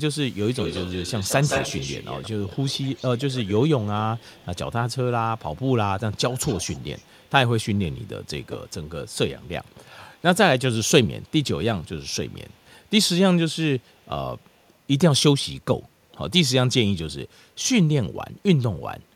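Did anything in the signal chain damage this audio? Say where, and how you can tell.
Yes. An echo leak in call processing: a delayed copy trails the speech by 170 ms at 0.26–4.56, 5.37–5.63, 6.11–7.3, 7.65–8.87, 11.26–11.32 and 12.06–12.69 s. It is about 15 dB down at first and much lower later, likely from a loudspeaker-side echo canceller letting sound through. A spectrogram shows harmonic patterns repeated 170 ms later at lower level.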